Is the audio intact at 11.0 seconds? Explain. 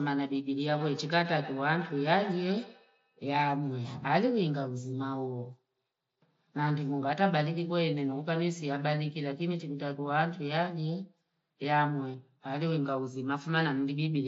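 Yes, the audio is intact at 11.0 seconds, with nothing there beyond the ordinary band limit of the Bluetooth mSBC headset path, which leaves nothing above about 7.7 kHz.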